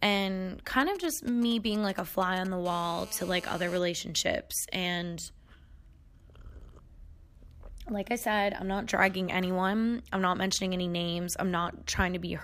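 From 0.80 to 2.47 s a galloping dit-dit-dit of brief raspy buzzes cuts across the speech, sitting roughly 15 dB below it. These are GSM signalling bursts. A 2G phone close to the recording chain is exchanging short control transmissions with its network rather than carrying a call. The audio circuitry rectifies those radio pulses, so each group lands as a short 217 Hz buzz.

At 2.65 s the pattern gives way to a continuous, hard, harmonic-rich buzz at 217 Hz, about 18 dB below the speech, that lasts until 3.79 s. This is GSM phone buzz from a handset now in a call and transmitting a burst every 4.6 ms without pause. Because the interference comes from demodulated radio energy, not from the audio, its pitch and rhythm take no notice of the speech underneath.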